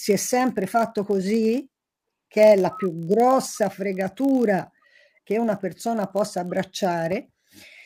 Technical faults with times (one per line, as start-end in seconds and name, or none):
0.00-7.85 block size mismatch (padded)